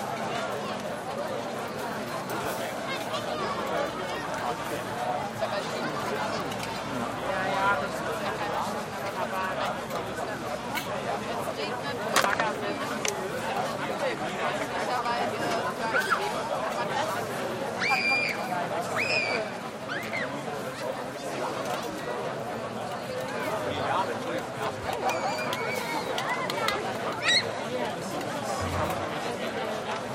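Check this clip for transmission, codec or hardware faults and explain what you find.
Nothing here points to a transmission, codec or hardware problem; the sound runs along steadily with no glitches to report.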